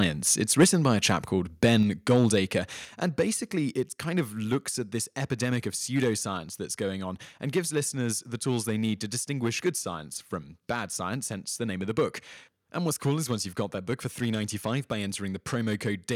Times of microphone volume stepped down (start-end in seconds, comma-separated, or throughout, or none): 0.64, 2.85